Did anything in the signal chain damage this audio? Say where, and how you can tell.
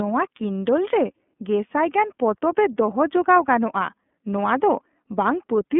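Yes, at the codec: iLBC codec throughout. A spectrogram shows a flat ceiling near 3.8 kHz, and the rough, synthetic texture fits independently coded 30 ms frames.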